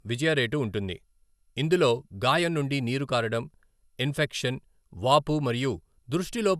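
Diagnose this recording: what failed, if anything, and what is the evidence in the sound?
The codec stage failed, and the fault runs through the whole speech clip. The sound is swirly, smeared and hollow, with blurred attacks and nothing above 12.6 kHz. The likely cause is generation loss: a lossy chain, consistent with 128 kbit/s MP2, re-encoded about four times, each pass stacking fresh quantisation noise.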